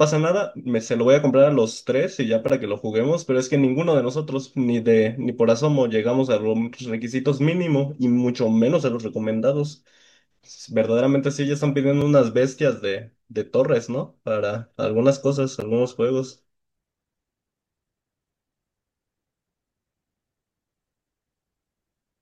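Speech with three sharp ticks where the audio drops to dead digital silence: about 11.6 ms at 2.49 s and 15.6 s, and 2.9 ms at 12.01 s. These blocks of digital silence, abrupt zeroed gaps whose lengths fit 512- and 128-sample buffers, point to output buffers not being filled in time.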